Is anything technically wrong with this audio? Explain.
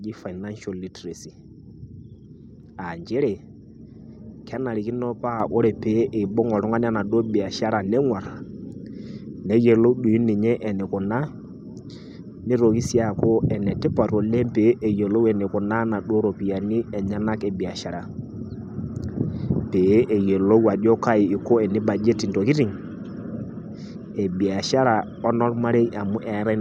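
Yes, there is one fault. At 5.4 s the microphone volume stepped up: the call software judged the input too quiet and raised the device's capture gain in a single jump of about 6 dB. Because the change is applied at the input, before any processing, the speech and the background noise floor rise together. The result is an abrupt, permanent increase in level from that point on, with no fade.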